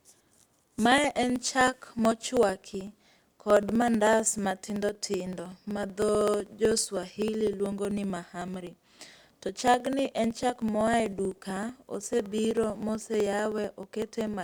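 Speech, carrying periodic USB or driver dropouts from 0.10 s to 14.34 s. Every 0.063 s, about 16 times a second, roughly a millisecond of audio is skipped outright, so the waveform jumps across the gap. That splice makes an evenly spaced tick, around two hundred in all, audible wherever there is signal and absent in pauses. The fixed interval points to a background task stalling the USB bus or audio driver on a regular schedule.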